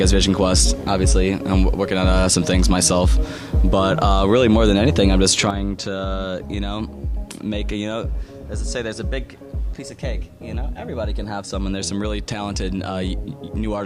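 At 5.50 s there is a sudden gain jump: the level drops by about 9 dB in a single step and stays down for the rest of the clip. The sound and the background noise fall together, with no fade between them. The likely cause is a digital gain change applied from one sample to the next without a ramp. On the waveform the envelope narrows abruptly at that point, and on a spectrogram every frequency band dims at once along a sharp vertical edge.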